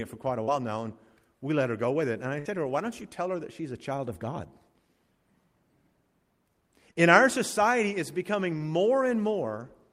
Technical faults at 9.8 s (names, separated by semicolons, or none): none